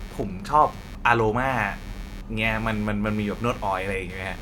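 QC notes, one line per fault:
Throughout: computer activity noise, a buzzing, chirping layer around 20 dB below the speech that rises and falls with the machine's workload rather than with the talker. Shifting processor, graphics or mouse load disturbs the ground shared with the audio circuit, pulsing at roughly 100 per second. A spectrogram shows evenly spaced vertical striations and comb-like harmonic lines continuing through pauses, and the waveform carries a spiky, uneven noise floor between phrases.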